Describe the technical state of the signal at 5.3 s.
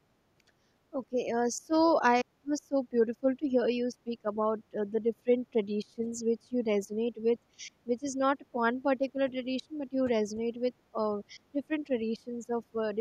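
At 5.3 s the signal carries overdone noise removal, present across the whole clip. The noise reduction is set so hard that frequency bands near its noise estimate are pulled almost to nothing, leaving a background that drops and breaks up into twinkling specks. Unlike plain band-limiting, the loss flickers band by band.

The same moment falls inside a stretch from 0.38 s to the end where the speech dips by up to about 20 dB, affecting about seven seconds in all. This is likely speech suppressed in double talk, an echo canceller ducking its own talker while the far side speaks. Unlike the denoiser's steady twinkle, these drops come and go.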